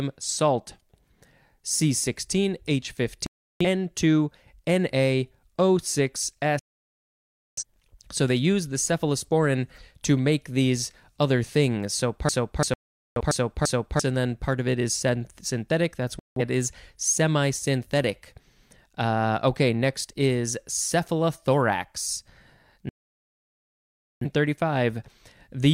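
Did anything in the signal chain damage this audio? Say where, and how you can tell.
Yes. The receiving stage shows a digital broadcast dropout five times. The speech mutes abruptly at 3.26–3.65 s, 6.59–7.63 s, 12.74–13.21 s (right after "make these other things"), 16.19–16.41 s (ending just before "is semi synthetic") and 22.89–24.26 s. The gaps run from about 0.17 s to 1.32 s, each a multiple of roughly 43 ms, which fits whole frames failing and the decoder muting until valid frames returned. The speech in those gaps is lost.

A system hang loop in the driver or buffer stage runs from 12.29 to 14.00 s, ending before "and then part of". One 341 ms slice of audio repeats exactly, five times, at about 2.9 Hz. That gives the machine-gun stutter of a long ring buffer replayed while the host stalled, which fits a 16384-sample buffer. Roughly 1.5 s of the speech is missing, and the 12.74 s dropout falls inside this loop.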